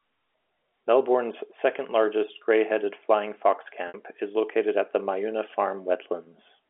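At 3.88 to 3.94 s, and again at 6.24 to 6.26 s, packet loss with pitch repetition bridges gaps of 60 ms and 20 ms by repeating the last pitch period, heard at 6.24 s as a brief held buzz and at 3.88 s as a fade into silence before speech returns with a short cross-fade, over the 300 to 3400 Hz G.711 telephone band.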